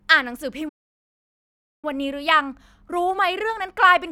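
At 0.68 s the speech cuts to silence for 1.14 s, until 1.85 s, a playback stall likely from the player running short of data; its length sets it apart from a brief dropout.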